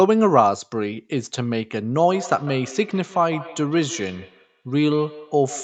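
From 2.03 s to the end, the speech is trailed by a thin, ringing repeat about every 150 ms, peaking about 17 dB below it. This is feedback echo between two devices: another device replays the call, this microphone recaptures it, and its echo canceller can't remove sound it didn't play.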